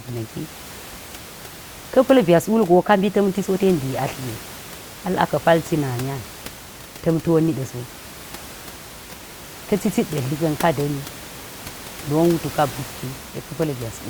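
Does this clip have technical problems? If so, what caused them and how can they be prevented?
No, the clip has no technical problems. The background noise of the room sits about 17 dB below the speech and is part of the recording itself.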